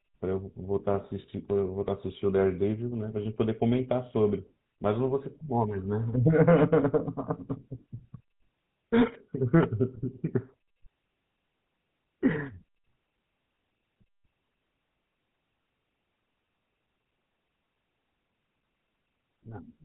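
Speech runs through the GSM full-rate codec for its whole length, and the damage is plainly audible. There is a buzzy, gravelly roughness on the voice and nothing above 4 kHz, which fits coding at about 13 kbps. The codec rebuilds the vocal tract as a filter driven by regular pulses, keeping only every third excitation sample, so the grit comes from that coarse excitation. A plain low-pass filter or narrowband resampling would be muffled but clean.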